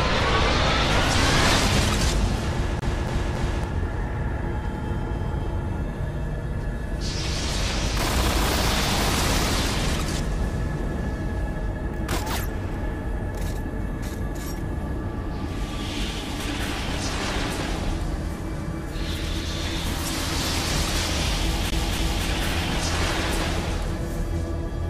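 At 2.79 to 3.64 s and again at 21.70 to 22.27 s, it's a CD stuck on one turn: the laser jumps back, looping 0.28 s of sound three times, then twice, with mutes between.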